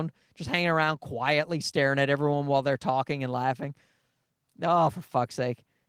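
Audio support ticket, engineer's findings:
No audible faults found; Opus voice coding sounds normal.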